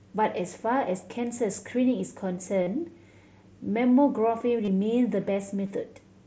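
Concealed Bluetooth headset packet loss occurs at 2.63 s (38 ms), 4.65 s (30 ms) and 5.67 s (23 ms). The receiver filled each gap from lost headset packets by repeating a recent matching waveform stretch, so each gap sounds like a brief buzzy hold. On a spectrogram this shows as frozen, stripe-like harmonics, and on a waveform as repeated identical cycles.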